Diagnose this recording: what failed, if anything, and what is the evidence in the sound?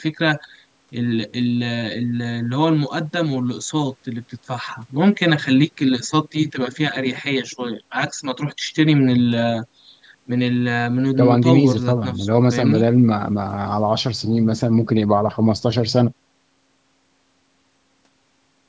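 Nothing failed: the speech shows only the ordinary shaping of call microphone processing, with the lowest bass trimmed by its high-pass filter and no content above 8 kHz, and no stage in the chain has added any audible defect.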